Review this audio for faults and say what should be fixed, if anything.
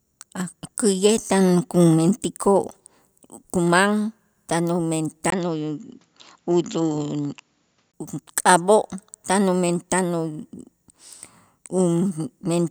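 From 5.30 to 7.94 s the speech dulls, with nothing above 7.6 kHz, after a 20 ms gap: the input likely switched to a narrower-band, poorer device. Lock the recording input to one microphone and turn off automatic device or headset-profile switching during the session.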